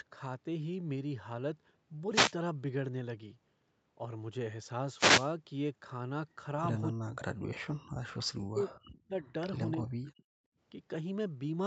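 At 2.11 to 2.34 s and again at 4.90 to 5.33 s there's a wireless microphone noise hit: the analogue FM radio link fades as reflections cancel, receiver noise surges up, and you get a quick swish of static over the speech.

From 6.93 to 7.50 s, 8.30 to 9.27 s and 9.78 to 10.23 s the talker keeps getting chopped. The level drops by something like 40 dB in pieces. That's most likely speech suppressed in double talk, where the echo canceller can't tell the near talker from the loudspeaker echo while both sides speak, so it pulls everything down.

Also, at 7.85 to 7.96 s and 10.51 to 10.58 s, the room tone briefly drops out, by about 34 dB and then about 20 dB. That's background gated by the echo canceller: it clamps the mic hard while the loudspeaker plays and lets the room sound back once it releases.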